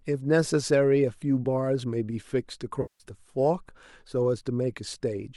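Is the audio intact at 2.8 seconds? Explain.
No. From 2.82 to 3.04 s, AAC frame loss with concealment hits. The decoder rebuilds about 180 ms from the last good spectrum, giving a smeared, noisy patch: blurred spectrogram harmonics and a flattened, dipping waveform envelope.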